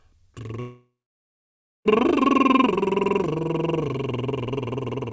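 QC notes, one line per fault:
0.60 to 1.87 s, long network dropout. The music stops arriving at 0.60 s. The receiver carries the last sound on as a brief buzz or hiss that fades, then leaves near silence for about 0.95 s. The music resumes at 1.87 s, but about 1.26 s of it is simply gone. This is likely lost packets on the call link, with the receiver filling the gap. The band above 8 kHz stays empty on both sides of the gap.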